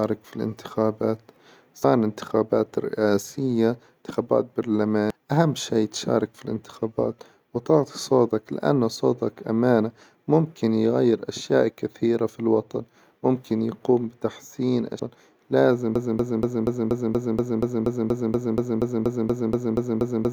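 At 1.84 to 1.87 s, 5.10 to 5.14 s and 14.99 to 15.02 s there is damaged data in the compressed stream. Each event lasts about 30 ms. Bytes in the coded speech were corrupted there. The decoder misread those frames, lost sync and hunted for the next valid header. Each time the result is a brief chirp, squawk, click or short hole.

From 15.96 s to the end, a broken-record loop takes over. A fragment of about 239 ms repeats exactly, back to back, roughly eighteen times. The speech that belonged there is lost and never returns. The likely cause is a stalled player, encoder or stream. It kept resending the last piece it held.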